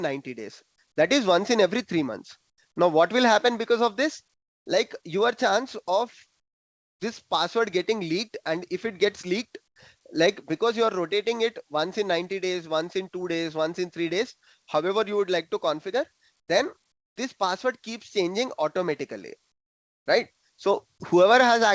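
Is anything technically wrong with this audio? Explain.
Yes. Comfort noise in place of the background appears at 2.50–2.58, 4.34–4.66, 6.40–7.00, 9.68–9.76, 16.40–16.48, 16.92–17.16 and 19.52–20.06 s. The likely cause is discontinuous transmission: the sender stopped sending during quiet gaps, and the receiver filled them with synthetic noise. The real background is replaced by a flat, featureless hiss, about 16 to 25 dB quieter. The band stops at 8 kHz, which fits a 64 kbps G.722 call path.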